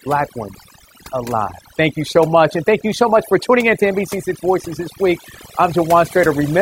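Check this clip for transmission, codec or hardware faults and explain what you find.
The clip has one processing fault, overdone noise removal, present throughout. A noise reduction stage set far too aggressively cuts any frequency band near its noise estimate, taking quiet speech detail with it. The background drops and breaks up into twinkling specks.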